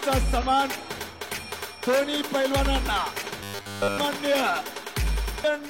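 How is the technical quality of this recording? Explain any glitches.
Two short decoding glitches and one robotic stretch affect the quality.

At 0.38–0.44 s and 3.25–3.31 s, damaged data in a compressed stream makes the decoder lose frame sync, producing brief chirps, squawks, clicks or short holes that show as broadband smears on a spectrogram.

From 3.43 to 3.98 s comes a robotic sound, likely from repeated short buffers. A 10 ms chunk loops throughout, giving a rigid 100 Hz buzz that appears as evenly spaced harmonic stripes and an identical repeating waveform.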